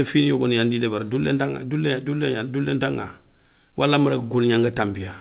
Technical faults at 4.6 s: none

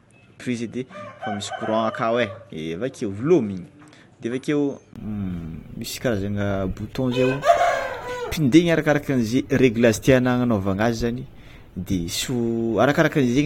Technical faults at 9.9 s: none

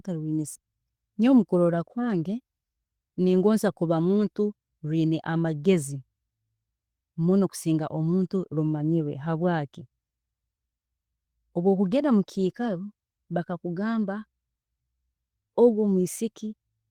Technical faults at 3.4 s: none

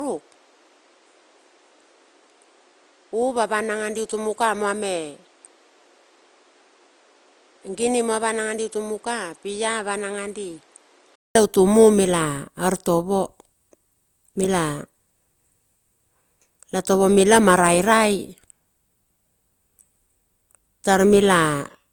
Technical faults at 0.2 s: low-bitrate audio saved at a high bitrate; input switched to a poorer device

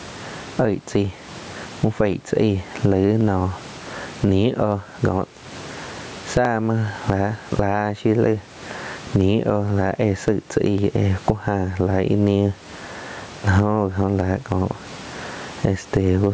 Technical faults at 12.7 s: gain pumping; clock drift buffer slips

